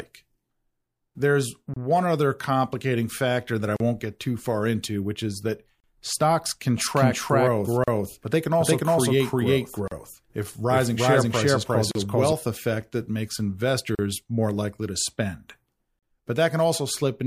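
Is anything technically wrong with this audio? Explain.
Yes. Brief silences cut into the speech at 1.74, 3.76, 5.80, 7.84, 9.88, 11.91 and 13.95 s, recurring every 2 s and lasting about 28 to 38 ms. These are gaps at a join of encoded pieces: separately encoded chunks were joined without trimming the encoder's start delay and final-frame padding.

From 6.78 to 12.33 s a doubled audio track is audible: an equally loud, dry copy of the speech trails the original by roughly 0.4 s. This is likely a second capture through a slower path or an edit holding two out-of-step copies.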